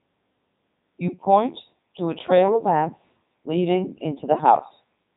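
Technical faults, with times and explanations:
Throughout, Codec 2 vocoder: speech rebuilt from sine waves sounds robotic and buzzy, not just muffled. Nothing is heard above 3.8 kHz, which fits a 3.2 kbit/s mode.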